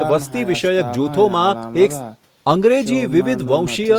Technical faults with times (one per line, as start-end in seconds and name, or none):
none